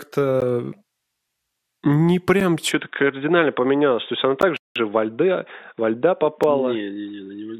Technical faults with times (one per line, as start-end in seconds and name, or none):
0.40 gap between stream segments
2.40 gap between stream segments
2.71-7.60 input switched to a poorer device
4.41 gap between stream segments
4.56-4.76 playback stall
6.43 gap between stream segments